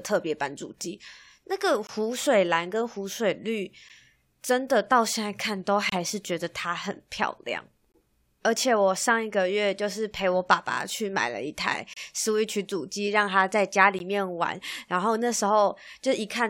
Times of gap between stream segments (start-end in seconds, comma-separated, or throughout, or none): 1.87-1.89, 3.89, 5.89-5.92, 7.92-7.94, 11.93-11.97, 13.99